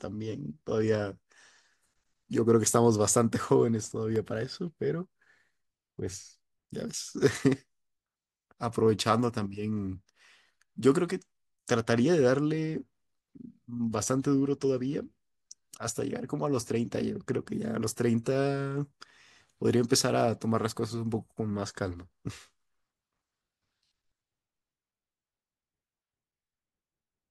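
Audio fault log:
3.56–4.36 s, CD scratch ticks: five regular ticks, about six per second, the longest around a millisecond. A scratch defeats error correction once per disc turn, and the concealed samples click. The spectrogram shows thin, evenly spaced vertical broadband lines. The waveform shows matching tiny spikes or gaps.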